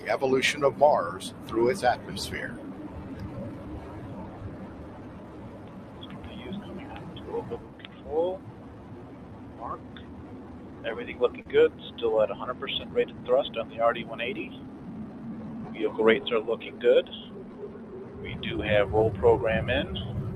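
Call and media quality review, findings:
Noise suppressor applied to music or sounds, throughout. Held tones and tails duck by around 15 dB while attacks pass. Speech-tuned suppressor treating sustain as noise, causing pumping.

Short concealed packet loss, 11.41 to 11.47 s. Brief smear. About 40 ms missing, 35 ms of it filled by extending prior sound, then crossfaded back.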